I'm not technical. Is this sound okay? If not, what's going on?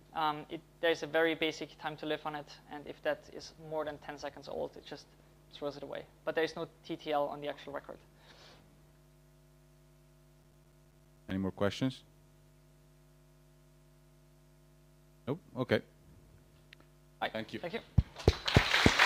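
No. From about 10.34 to 11.31 seconds there is processor overload crackle. The computer was too busy to deliver its tiny chunks of audio on time, and around twenty were missed, each leaving a brief silent gap that sounds like gritty crackling.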